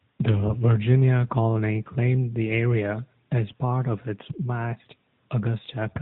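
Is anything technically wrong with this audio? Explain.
Yes. Throughout, the speech went through an AMR narrowband mobile codec, which drops everything above 4 kHz and rebuilds the speech from a pulse-driven vocal-tract model. This leaves a plainly buzzy, synthetic tone that fits a bitrate near 10 kbps.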